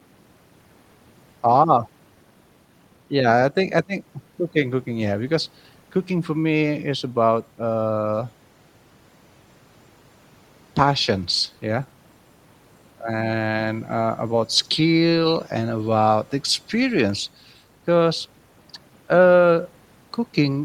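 Listening to the speech recording brought nothing to the ear that called for comment.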